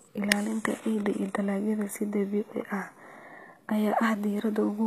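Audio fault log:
Throughout, HE-AAC compression: the upper spectrum of the speech sounds synthetic rather than recorded, with s sounds coming across gritty, metallic and lispy. This is likely spectral band replication. The codec transmits only the lower bands and regenerates the treble by copying them upward under a coarse envelope, so the rebuilt harmonics fail to align with the originals above the crossover. The damage is plainly audible, which fits a low bitrate around 24 kbps.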